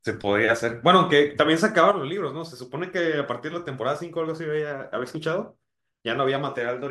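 At 1.91 s the speech abruptly falls in level by about 6 dB and stays quieter through to the end, with no fade or recovery. The likely cause is one channel dropping out of a stereo recording: once the two sides are summed to mono, everything shared between them loses half its contribution, producing that sudden 6 dB step, and any sound present only in the missing channel vanishes entirely.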